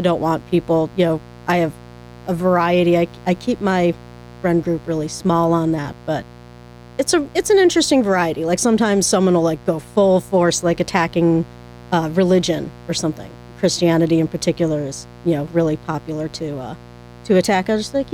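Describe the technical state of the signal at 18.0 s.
Mains buzz is present at 18.0 s, as it is across the entire clip, sitting roughly 25 dB below the speech. Sharp switching spikes, of the kind a dimmer, rectifier or poorly shielded cable lets in, arrive twice per cycle of a 60 Hz supply, stacking up harmonics of 60 Hz that extend into the kilohertz range. The result is a steady, raspy buzz running continuously beneath the speech rather than a smooth hum.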